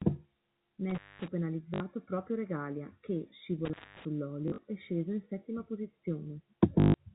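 A telephone-band speech recording, carried over G.711 A-law so nothing above 4 kHz is present, with two kinds of fault. Intermittent contact cuts the sound at 0.90 to 1.28 s and again at 3.65 to 4.05 s, just before "è sceso in settima". Each time a loose plug or cable opens for about 0.21 to 0.23 s, leaving faint hiss with crackle at both edges where the contact breaks and remakes. Packet loss with the last packet repeated shows up at 1.74 to 1.80 s (60 ms), at 4.48 to 4.64 s, and at 6.80 to 6.94 s (140 ms). In the middle event, 100 ms of loss is scattered across 160 ms, with no run longer than 40 ms. The receiver replays the previous chunk in place of each missing one, and the repeats fall out of step with the pitch. The longer runs take on a robotic buzz, which fits 20 ms packets. What separates the two is what fills the gap: the contact faults drop to near silence with crackly edges, while the packet faults never go quiet and instead stutter on recycled sound.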